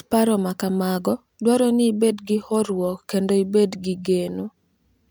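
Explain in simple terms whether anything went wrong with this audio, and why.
Nothing went wrong here; every part of this recording of speech sounds just as it should, with no glitches, dropouts or odd sounds to point to anywhere along the way.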